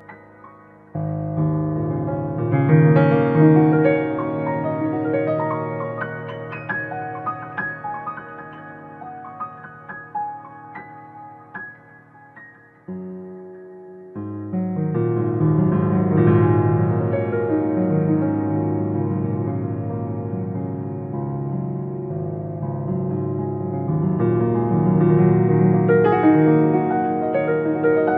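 Channel delay (comb filtering) runs for the whole clip: one channel arrives around 5 ms late, and summing to mono cancels shared content at evenly spaced frequencies, the first near 100 Hz, leaving fixed notches that make the sound hollow and phasey throughout.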